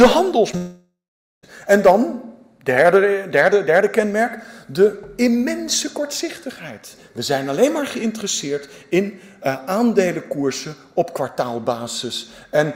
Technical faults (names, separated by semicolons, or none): short concealed packet loss; long network dropout